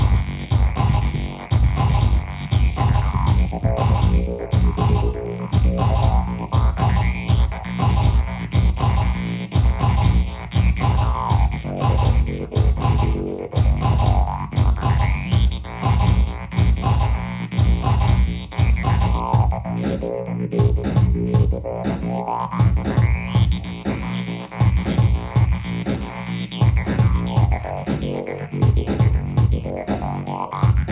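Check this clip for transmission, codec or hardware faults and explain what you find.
No faults detected.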